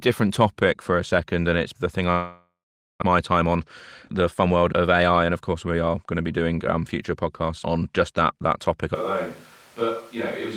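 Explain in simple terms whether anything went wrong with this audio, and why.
Long network dropout, from 2.11 to 3.04 s. The sound suddenly stops moving forward. Instead the last bit of sound is stretched into a buzz that fades, followed by almost half a second of silence. When the sound returns, about 0.6 s of it is simply gone. The likely cause is that the connection stopped delivering audio for a moment, so the receiver had nothing real to play and filled the gap as best it could.

Jitter buffer speed-up, from 3.31 to 3.59 s and again from 4.21 to 6.01 s. Here the sound plays about 13% faster but keeps its normal pitch, so it comes across as rushed. After the dropout, delayed audio arrived in a bunch. That left the receiver holding too much, running roughly a third of a second behind. To catch up, it quietly snipped out tiny slices, about 50 ms in total in the first stretch and about 200 ms in the second.

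Switch to a distant microphone, from 8.95 s to the end. At that moment the sound abruptly becomes quieter, thinner and more hollow, as if recorded from across a room, and background noise becomes noticeable. The likely cause is that the close microphone dropped out or was not used, so the recording fell back on one placed much farther away, which picks up more of the room and less of the source.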